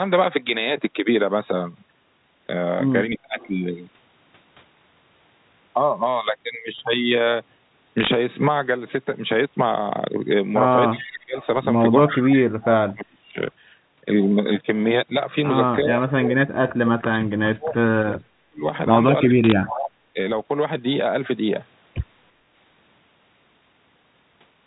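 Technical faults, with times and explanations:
3.18–3.39 s, 10.9–11.36 s, 12.1–13.39 s, 15.82–18.64 s, 19.28–19.97 s and 20.13 s, speech suppressed in double talk: the talker's level sags or drops out in pieces, from a slight dip of about 10 dB at 20.13 s to near silence of about 40 dB during the long 15.82–18.64 s stretch, with drops of about 20 to 35 dB elsewhere. The likely cause is the far side talking at the same moment, so the echo canceller could not tell the talker from its loudspeaker echo and turned everything down.
3.4–3.48 s and 11.0–11.46 s, echo leak: a faint, delayed copy of the voice trails in 343 ms behind the original. It sits roughly 30 dB down in the brief first scrap and is more noticeable, roughly 20 dB down, in the longer second one. This is likely a loudspeaker on one end whose echo canceller left part of the microphone pickup in place and sent that remnant back down the line.
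7.98–8.14 s and 19.44–19.52 s, bit errors on a digital phone line: short bursts of sharp ticks and crackle sit on top of speech that is otherwise unchanged in tone, denser in the later burst. Each flipped bit in the telephone coding alters a single sample. Errors that land on the sign or upper bits turn that sample into a sudden spike, which the ear hears as a click. Clusters of these spikes blur together into the crackling texture heard here.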